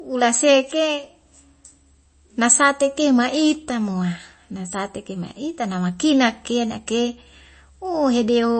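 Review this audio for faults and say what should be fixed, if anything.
The whole clip has a hard treble ceiling, with nothing above 8.3 kHz, and the speech sounds watery and swirly throughout. That's likely MP3 compression at a starved bitrate, around 32 kbps, where the encoder cuts the top and drops quiet detail frame to frame. Work from a lossless source, or encode at a much higher bitrate.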